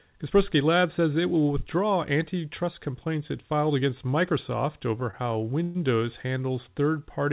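From 5.0 to 5.77 s the speech shows repeated stalls (stutter). The sound halts four times in under a second. Packets arrived late, so the jitter buffer ran dry. Each time, the receiver stretched the last sound to cover the wait. About 159 ms is filled this way, the longest stretch 121 ms, where the held sound fades. Nothing is lost, but the speech drags and stutters. The audio stops at 4 kHz, which fits a G.711 A-law call path.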